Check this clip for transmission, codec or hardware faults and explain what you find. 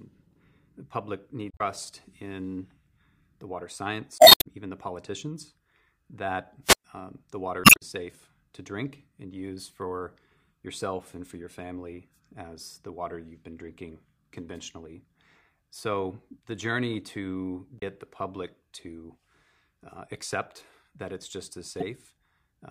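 Two kinds of fault are present: damaged data in a compressed stream, heard five times, and one wireless microphone squelch dropout.

Damaged data in a compressed stream occurs at 1.48 to 1.61 s, just after "the public", then at 4.16 to 4.46 s and 7.61 to 7.82 s. It recurs at 17.76 to 17.82 s, between "the journey to" and "the public to", and at 21.80 to 21.83 s. Part of the coded stream is corrupt. The decoder misreads those frames, loses sync and hunts for the next valid header. Each event breaks the sound as a chirp, squawk, click or short hole.

The wireless microphone squelch dropout runs from 6.63 to 6.84 s, after "even the politicians that" and before "um the". The radio link from the FM microphone weakens. Hiss rises. The receiver's squelch then mutes the output for about 115 ms, leaving a hole of near silence. The signal returns as the link recovers.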